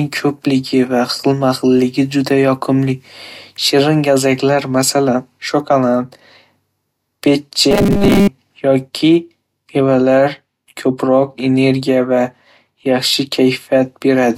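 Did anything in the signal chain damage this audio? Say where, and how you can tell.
Yes. From 7.71 to 8.28 s the speech turns into robotic sound from repeated short buffers: a rigid, metallic buzz at 200 Hz that only loosely tracks the original. The stage is likely the driver or buffer, starved of fresh audio and replaying its last block to fill the gap. A 200 Hz repetition rate fits a 5 ms block, and roughly 70 percent of that stretch is repeated material rather than real audio.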